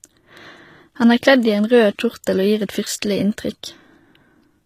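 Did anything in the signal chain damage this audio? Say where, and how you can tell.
Yes, at the codec stage: throughout, the treble sounds gritty and metallic with nothing above 14.9 kHz, likely HE-AAC compression near 20 kbps, whose replicated bands mismatch harmonics, unlike plain low-pass dullness.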